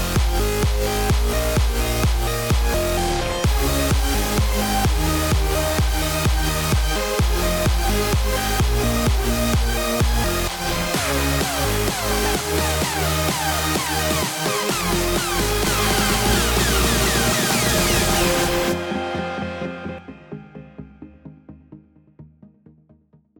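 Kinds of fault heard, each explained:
Doubled audio track: A second, slower capture path or an edit holding two copies out of step has likely mixed the same audio in twice. From about 15.7 s to 20.0 s, a full-band copy trails the original by around 300 ms at roughly equal loudness. This produces a distinct, clean repeat with no decay or room colour. The copy appears and disappears abruptly at those boundaries.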